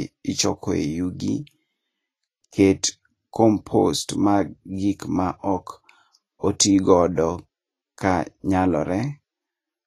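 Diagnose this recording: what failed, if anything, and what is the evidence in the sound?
Codec stage. Hissy, grainy treble runs throughout, with nothing above 14.2 kHz. This is likely Vorbis compression at a low setting, fitting roughly 28 kbps.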